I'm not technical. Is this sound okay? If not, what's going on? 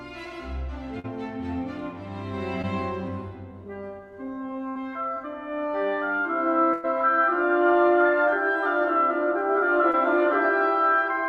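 No. There are short dropouts where bits of the sound went missing on the way.

Short concealed packet loss happens three times: at 0.99 s, 2.62 s and 9.91 s. Each gap is tiny, 20 to 40 ms. The receiver patched it by stretching the last sound, so you hear a brief smear or wobble.

A burst of packet loss happens twice. At 4.69 s, 60 ms is lost. At 6.73 s, 100 ms is lost. The receiver held the last sound as a buzz or fading hiss, then jumped ahead. That part is simply gone.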